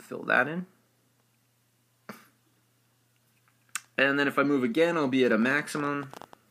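Likely interference or a faulty connection injects a train of clicks from 5.32 to 6.34 s: about fifteen uneven pops, roughly as loud as the sound itself.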